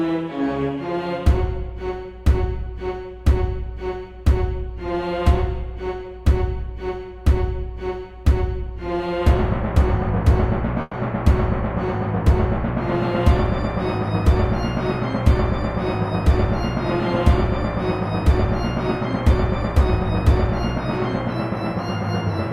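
At 10.81 s, lasting until 10.95 s, a burst of packet loss cuts out about 120 ms of the audio. The receiver fills the gap by stretching the last sound it had, turning it down as it goes, then leaves roughly 10 ms of silence before resuming further along. On a spectrogram, the final spectrum before the gap is smeared horizontally and fades, followed by a thin blank column and an abrupt restart. The waveform shows a repetitive, shrinking envelope.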